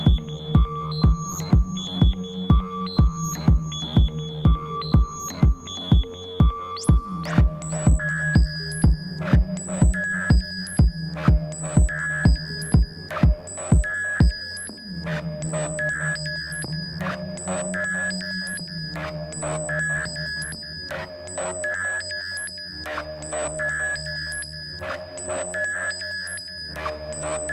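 No faults found: nothing in the recording calls for correction.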